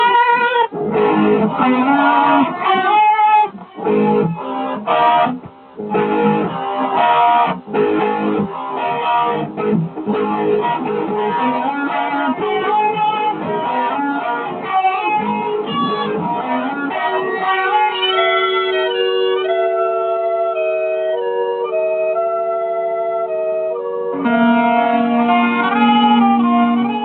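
Across the whole clip, a noise suppressor applied to music or sounds is pulling sustained material down. It is a speech-tuned processor misreading steady tones, ambience and decays as noise, so gain swings by around 5 dB and the sound pumps and thins. This differs from a compressor, which reacts to loudness. Here onsets pass intact while the held parts beneath them sink, giving the level a fluttering quality rather than a loudness-driven squeeze.

Seven brief spots show sound cut by the noise suppressor harder than the rest: 3.52–3.79 s (about 7 dB), 5.40–5.78 s (about 8 dB), 7.60–7.75 s (about 7 dB), 8.47–8.82 s (about 6 dB), 13.33–13.49 s (about 5 dB), 14.38–14.70 s (about 6 dB) and 23.73–24.00 s (about 5 dB). Each lasts roughly 150 to 400 ms. Unlike a dropout, the signal never vanishes. Sustains and tails dip and their decays are clipped short, while any sharp transients inside those windows still come through.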